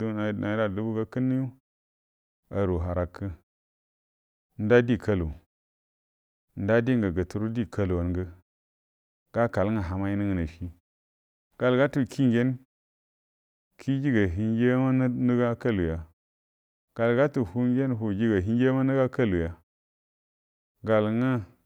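Nothing in this speech clip points to a technical fault, so there's nothing here to flag.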